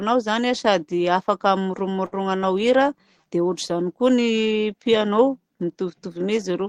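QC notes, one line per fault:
1.63–1.68 s and 2.06–2.15 s, short stall from a late packet: a packet arrived late twice and the jitter buffer ran dry. The receiver held the last sound for about 16 ms and then about 62 ms, then resumed at the same point, so nothing is lost but timing slips by those amounts. Each stall is a drawn-out hold with a slight buzz or dip. On a spectrogram the partials run flat and unchanging, and the waveform shows near-identical repeated cycles.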